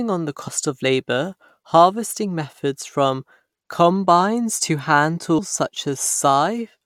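Damaged data in a compressed stream shows up twice in this speech, at 0.47 s and again at 5.38 s, each a brief glitch lasting under 20 ms. At both points some bytes of the encoded stream were corrupt, so the decoder could not read the affected frame properly. It briefly lost sync while hunting for the next valid frame header, and the misdecoded fragment came out as that short glitch.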